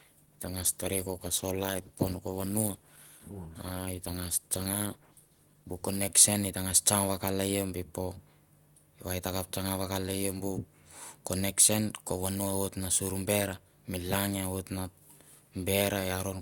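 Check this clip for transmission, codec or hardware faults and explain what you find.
One fault: an adaptive stream starting at a low bitrate. From 0.0 to 6.0 s the speech lacks treble and carries heavier codec artefacts, pointing to roughly 16 kbit/s Opus. Then the player, having measured the connection, switches up, near 64 kbit/s. Unlike a rebuffering stall, the improvement is abrupt and gapless.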